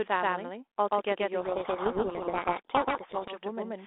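From the start, the speech is heard twice. A doubled audio track, likely from a second capture path, repeats everything about 150 ms later at roughly equal level, with no room decay.

From 1.4 s to 3.38 s, a codec payload misread occurs. The G.726 code words are unpacked in the wrong bit order, so the telephone-band speech drowns in harsh distortion.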